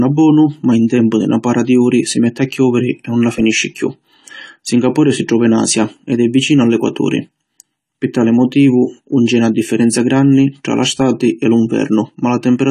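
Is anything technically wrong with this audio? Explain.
Yes. Throughout the speech the sound is dull and smeared, with nothing above 14.1 kHz, and sibilants and held vowels take on a fizzy, warbling texture. This is AAC compression, likely AAC-LC at a low bitrate, and the damage fits something around 32 kbps. The encoder quantises each block of frequency lines against a hearing model and, short of bits, drops the top band and leaves gaps or noise-filled bands in the spectrum.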